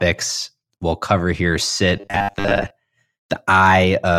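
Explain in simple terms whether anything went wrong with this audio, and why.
Right after "we'll cover here", from 1.97 to 2.72 s, the speech turns into a robotic sound from repeated short buffers. It becomes a rigid, metallic 100 Hz buzz, likely from late audio being patched by replaying 10 ms snippets. Unlike a stutter, no syllable audibly repeats.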